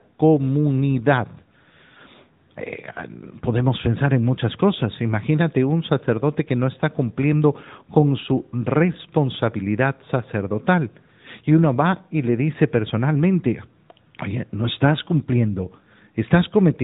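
From start to finish the speech carries AMR narrowband mobile codec damage, plainly audible. The codec samples at 8 kHz and rebuilds the voice from a vocal-tract model excited by sparse pulses, so nothing above 4 kHz survives and the voice sounds boxy, buzzy and synthetic, which fits a rate of about 10 kbps.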